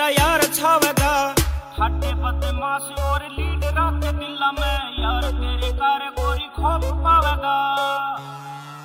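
Nothing faulty can be heard at any point in the recording. There is no moment that needs a timestamp or a fix.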